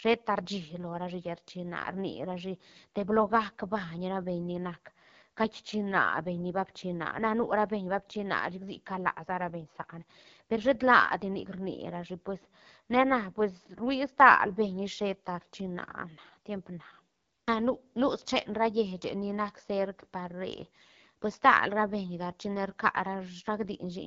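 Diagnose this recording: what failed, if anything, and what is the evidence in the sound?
AMR wideband (HD Voice) codec damage runs through the whole speech clip, a codec-stage fault. The speech sounds rough and raspy, with a noisy, hissy top band. That fits the second-lowest 8.85 kbit/s mode, where the pulse-driven vocal tract model below 6.4 kHz gets too few bits.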